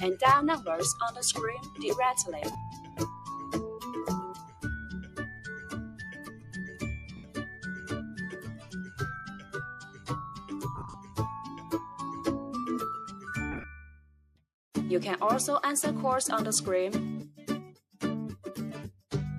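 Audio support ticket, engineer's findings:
Noise suppressor applied to music or sounds, whole clip. Speech-tuned suppressor left active on non-speech audio. Level swings of around 15 dB. Attacks pass. Sustained content and decay tails get pulled down. Result is pumping and a thinned, fluttering texture. Component: noise suppression stage in the capture or playback chain. It classifies steady tones, ambience and reverb as noise and attenuates them frame by frame.

Sound cut by the noise suppressor, five spots. 1.58–1.79 s, dips up to about 8 dB. 2.70–3.28 s, about 9 dB. 4.35–11.71 s, about 11 dB, intermittent, around three seconds affected in total. 13.10–13.27 s, about 5 dB. 13.82–14.45 s, about 12 dB. Same suppressor. Held or fading sound is judged as noise and ducked. Decays are truncated while transients survive.

Lost LE Audio frames, four spots. 2.52–2.55 s, 30 ms gap, which fits three 10 ms frames. 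7.17–7.24 s, 70 ms. 10.76–10.94 s, 120 ms lost, scattered across 180 ms, longest run around 40 ms. 13.52–13.64 s, 70 ms across 120 ms, longest run around 30 ms. Symptom: tonal content turns into a brief noisy smear. Component: Bluetooth LE Audio link, LC3 decoder concealment. The decoder repeats the last spectrum with randomised signs, fading it on longer runs.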